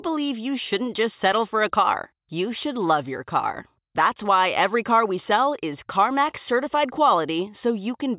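No technical faults can be heard anywhere in the speech. Nothing in the audio stands out as going wrong at any point.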